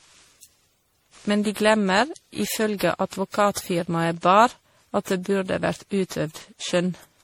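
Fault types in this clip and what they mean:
Generation loss, throughout: the speech sounds swirly, smeared and hollow, more so than a single lossy encode would leave, with blunted consonant attacks and a watery, holed-out top end. The likely cause is repeated lossy coding, with the audio decoded and re-encoded around ten times in a chain that fits 64 kbit/s MP3. Each pass requantised on a shifted frame grid, so the noise and spectral gaps piled up.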